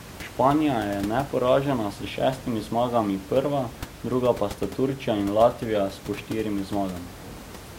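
No technical faults are audible anywhere in the recording.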